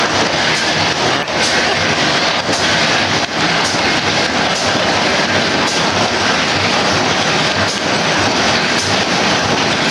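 Abrupt skips at 1.23, 3.98 and 6.73 s each drop roughly a third of a second with no gap, likely audio missing between 3-second chunks.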